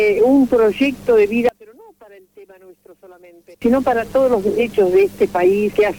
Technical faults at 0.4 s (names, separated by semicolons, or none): none